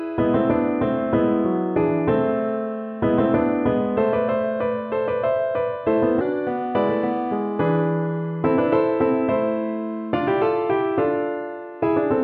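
A section at the wrong speed runs from 6.21 s to the end of the clip. At that point the audio abruptly plays about 1.12 times faster than before, and because speed and pitch are locked together, everything rises by roughly two semitones at the same moment. The likely cause is that this portion was played back or resampled against the wrong clock rate. The result sounds brighter, higher and more hurried than the opening half.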